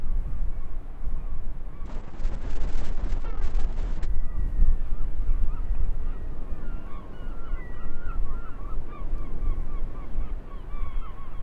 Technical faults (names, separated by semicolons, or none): call bitrate drop